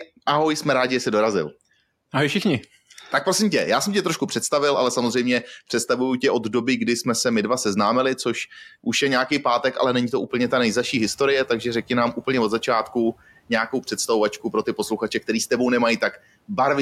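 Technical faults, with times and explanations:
10.29–11.89 s, noise suppressor catching up: The room noise steps up by about 13 dB at roughly 10.5 s, and the suppressor's noise estimate is still tuned to the quieter background. For a moment the louder noise passes with too little reduction, then it sinks as the estimate adapts over about 1.6 s, finally cutting the background by about 9 dB. The result is an audible swell of noise that fades back down.
14.42–15.02 s, speech cut by the noise suppressor: Within this stretch, the suppressor mistakes parts of the speech for noise and turns them down along with the background, by up to about 11 dB. The affected moments add up to roughly a tenth of a second, so soft consonants or word endings sound swallowed and faint. The room noise now sits about 24 dB below the speech.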